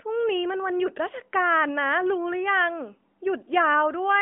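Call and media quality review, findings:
No faults found in speech.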